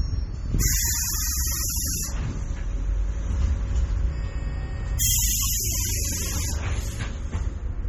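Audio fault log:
throughout MP3 compression: no content above 17.1 kHz and a heavy watery swirl, likely from an MP3 encoder short of bits, consistent with 32 kbps, dropping weak frequency lines.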